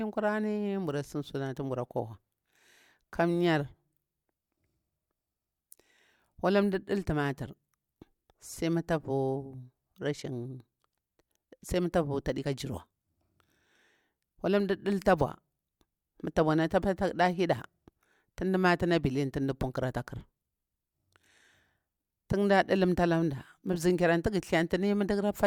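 No technical faults are audible.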